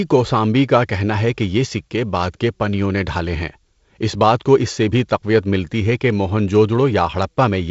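No technical faults can be heard in this speech, which comes through G.722 wideband telephone coding at 48 kbit/s with nothing above 7.7 kHz.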